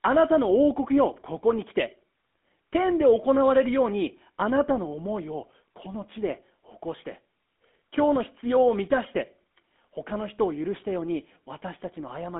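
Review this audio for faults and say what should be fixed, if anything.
GSM full-rate codec damage runs through the whole recording. The speech sounds buzzy and gravelly, because the codec rebuilds it from a vocal-tract model driven by coarse, regularly spaced pulses. Nothing survives above 3.8 kHz, and the band sits around 200 Hz to 3.5 kHz, which fits a 13 kbps full-rate stream. Capture from a wideband path instead of the GSM call leg.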